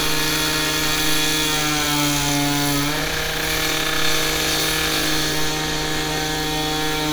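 A likely case of dropped samples, where the stream briefly loses well under a millisecond of data three times, so the waveform of this sound recording leaps straight from one value to a later one. Nothing audible goes missing, but each jump produces a single sharp click, visible as a thin vertical line through the spectrum, at 0.53 s, 2.29 s and 6.35 s.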